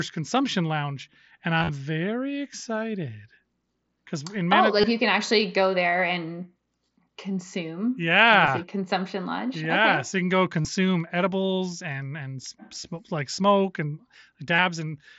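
Concealed Bluetooth headset packet loss breaks the speech six times: 1.59–1.69 s, between "consumption lounge and" and "very excited", where 75 ms of lost audio scattered over about 105 ms (longest run 30 ms) gives a short buzzy tone. It recurs at 4.81–4.84 s, 8.46 s, 10.62–10.65 s, 12.42 s after "edibles and and", and 14.55–14.59 s after "like smoke and". The receiver loops the last 20 ms or so of waveform, so unlike a plain dropout there's no silence, just a held buzz and a slight warble as real sound returns.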